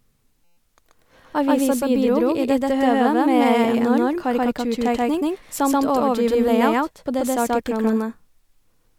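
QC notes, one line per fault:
Throughout, doubled audio track: every sound is followed by a second full-band copy about 150 ms later at roughly equal level, dry and without room colour, giving a hard slapback echo; the likely cause is the same signal being captured twice, once through a slower path.
0.45 to 0.57 s, system hang loop: a steady buzz at 172 Hz replaces about 100 ms of the speech, as one 5.8 ms slice repeats exactly 21 times; the system froze while the hardware kept cycling a buffer that fits 256 samples.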